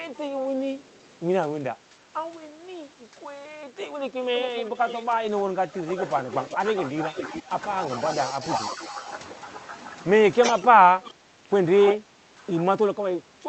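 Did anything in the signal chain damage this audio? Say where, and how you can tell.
Yes. Speech suppressed in double talk at 1.6–2.08, 5.19–9.08 and 10.41–13.48 s: the voice dips by about 10 to 15 dB. This is likely the call-processing echo canceller ducking during overlap.

Echo leak at 5.98–8.76 and 10.47–11.95 s: a copy trails 377 and 335 ms behind, about 15 and 5 dB down. This is likely loudspeaker echo the canceller missed.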